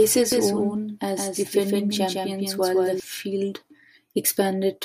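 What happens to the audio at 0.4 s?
At 0.4 s the clip is inside a doubled audio track running from 0.32 to 3.0 s. A second full-band copy of the speech trails the original by about 150 ms, roughly 5 dB quieter, with no decay. It is likely a second capture path or misaligned edit.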